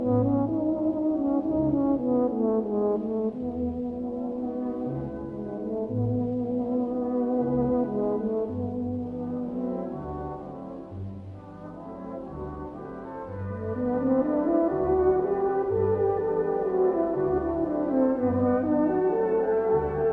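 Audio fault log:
No technical faults are audible anywhere in the recording; the signal holds steady and intact over its entire length.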